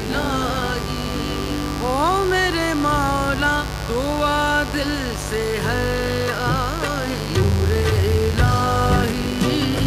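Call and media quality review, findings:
Mains buzz, full clip: steady raspy buzz sitting roughly 10 dB under the signal. 50 Hz mains, with switching spikes from a dimmer, rectifier or unshielded cable spraying harmonics up to several kHz. Unlike smooth hum, it has a harsh, bright edge.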